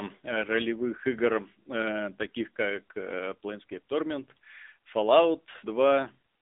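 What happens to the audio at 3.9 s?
At 3.9 s the speech sounds boxed-in and plainly synthetic, with nothing above about 3.7 kHz and little below 250 Hz. This is the AMR narrowband mobile codec, which runs through the whole clip. AMR-NB rebuilds speech from a vocal tract model excited by a pitch predictor and a few coded pulses per 5 ms, at a rate that fits a low mode near 8 kbps. That coarse pulse coding is what makes its damage plainly audible here.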